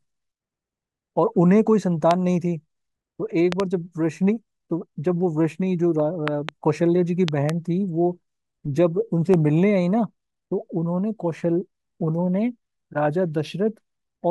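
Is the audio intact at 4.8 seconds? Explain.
Yes, the audio is intact at 4.8 seconds, with no dropout, click, distortion or other audible fault at that moment.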